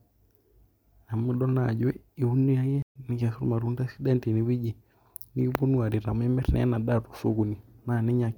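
Speech clip with a playback stall from 2.82 to 2.96 s. The sound halts mid-flow into roughly 132 ms of silence, then carries on. That gap is too long to be a click-like dropout. The likely cause is the player running short of data or its thread being blocked.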